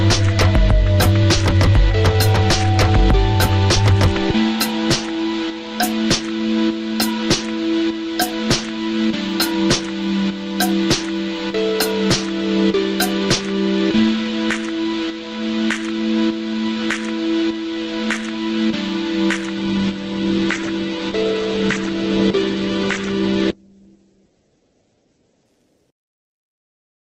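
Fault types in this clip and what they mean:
call bitrate drop: The encoder was told to spend far fewer bits. From 19.63 s to 25.57 s the sound turns coarse and loses everything above 8 kHz, which fits a fall from about 48 to 9 kbps. Full bandwidth returns afterwards.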